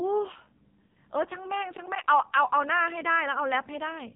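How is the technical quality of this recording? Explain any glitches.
The quality is poor throughout, because the whole clip has been through the AMR narrowband mobile codec. The speech sounds thin, buzzy and synthetic, like a heavily compressed phone call, with nothing above about 3.8 kHz. The codec samples at 8 kHz and rebuilds the voice from a vocal-tract model excited by sparse pulses. The heavy artificial buzz points to one of AMR-NB's lowest modes, around 5.9 kbps.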